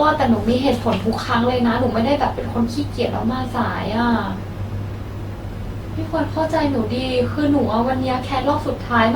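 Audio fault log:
throughout generation loss: speech was likely passed through an Opus coder around ten times at 64 kbit/s, so the noise from each pass stacks up, sounding swirly, hollow and smeared, with blurred attacks.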